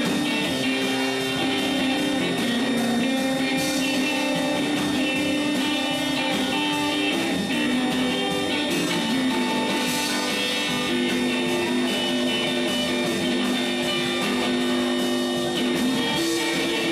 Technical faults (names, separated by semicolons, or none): switching supply whistle